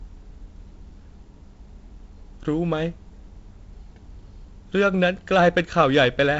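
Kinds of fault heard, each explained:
No kinds of fault are heard in the speech.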